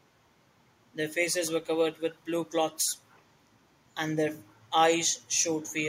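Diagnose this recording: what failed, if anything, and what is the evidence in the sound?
Echo leak at 2.85–2.92 s, 3.09–3.23 s, 4.48–4.59 s and 5.63–5.73 s, a call-processing fault. Faint, brief copies of the speech return about 292 ms after the original, roughly 30 to 40 dB below it, as scattered fragments. The likely cause is a far-end loudspeaker feeding its own microphone while the echo canceller there fails to fully subtract that pickup, so the residue travels back down the line.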